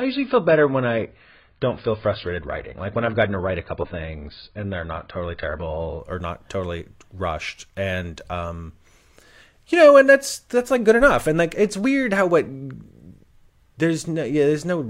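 From 0 to 6.0 s, an adaptive stream starting at a low bitrate leaves the spectrogram empty above 5 kHz. The treble returns abruptly, without a gap, before "or not totally rushed".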